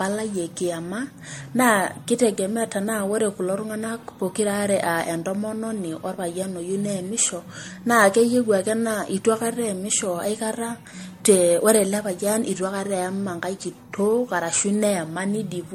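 Speech runs with a swirly, hollow, smeared quality from start to finish, with consonant attacks blurred and nothing above 16.5 kHz. This is generation loss, likely from about five successive MP3 encodes at a rate that fits roughly 62 kbit/s. A single encode at that rate would sound cleaner. Here each pass requantised on a shifted frame grid, so the noise and spectral holes piled up into smearing deeper than the bandwidth alone explains.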